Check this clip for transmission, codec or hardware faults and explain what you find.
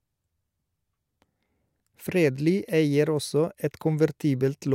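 No faults found.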